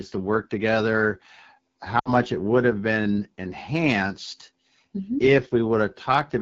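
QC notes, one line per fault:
Throughout: AMR wideband (HD Voice) codec. The speech sounds rough and raspy, which fits AMR-WB at its 8.85 kbit/s mode, one of its two lowest rates. The spectrogram shows structured harmonics up to 6.4 kHz, a noise-filled band from 6.4 to 7 kHz, and nothing above 7 kHz.
1.99–2.13 s: lost AMR speech frames. Just before "it would have been", the sound drops to near silence within two frames. The decoder repeated the last good pitch and vocal-tract settings at falling gain, consistent with three 20 ms frames lost. The spectrogram shows harmonics fading out quickly, and the waveform envelope decays.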